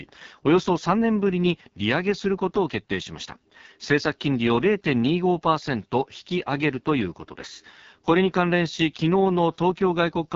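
Throughout the speech, the AMR wideband (HD Voice) codec runs at a very low rate, likely 6.6 kbit/s. The voice sounds rough and raspy. Nothing reaches above 7.2 kHz.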